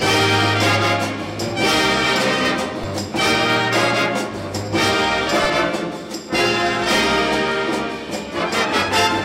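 The waveform's zero line jumps by about −19 dBFS at 2.84 s, a DC step that a 20 Hz high-pass then bleeds away, leaving a single low thump under continuing audio.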